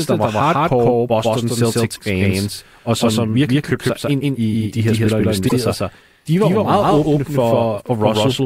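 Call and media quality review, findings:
Doubled audio track, whole clip: full-band echo of every syllable around 150 ms late, at roughly equal level, dry, no decay. Likely a second capture path or misaligned edit mixing two copies. Spectrogram: each onset repeated as an equally strong ghost offset in time.

Damaged data in a compressed stream, 1.92–1.99 s and 5.45–5.52 s: short glitches, each lasting about 70 ms. The first falls just before "fans og som virkelig". The second falls between "de her spillere og" and "sig de var jo". Corrupt frames make the decoder lose sync. Waveform shows a discontinuity. Spectrogram shows a brief disruption.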